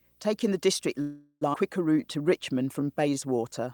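Video or display buzz runs through the whole clip: a buzz at 59.94 Hz, the field rate of a picture signal, with hash above it and a whistle at 15.7 kHz from the line rate. It sits roughly 35 dB below the speech, from a screen or video cable leaking into the audio path.

A call audio freeze follows from 1.01 to 1.43 s. For 0.4 s the last bit of speech is drawn out as a fading buzzy hiss with no true silence, then the talker resumes where they stopped. The likely cause is packets held up in transit, leaving the jitter buffer empty, so nothing is lost but a gap is inserted.

A skip ahead comes at 1.53 to 1.56 s. Roughly 0.3 s of speech is simply gone, and the two sides are butted together with only a tiny fill of about 4 ms. Audio was dropped while later audio was already queued, so playback jumped forward.

Jitter buffer slow-down stretches from 1.94 to 3.66 s. The speech plays at 88% speed, drawn out by about 0.21 s in total, yet at unchanged pitch. 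The receiver repeated single pitch periods and slivers of pauses to rebuild a reserve of buffered audio.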